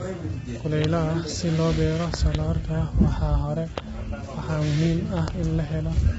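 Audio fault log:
throughout: low-delay AAC compression. The speech sounds rough and grainy, with noise filling in between the harmonics and nothing at all above about 7.8 kHz. That's likely AAC-ELD squeezed to around 16 kbps: its short frames can't resolve pitch harmonics well, so at that rate the damage is heavy.
0.84 s, 2.14–2.37 s (two pops), 3.78 s, 5.28 s: loud pop. Sharp pops, about 20 dB above the speech, land on top while the talking carries on underneath. The likely cause is a sudden voltage step or pulse, from a plug, switch, static or driver glitch, getting into the signal.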